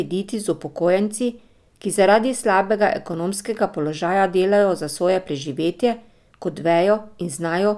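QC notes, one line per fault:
No technical faults are audible anywhere in the speech.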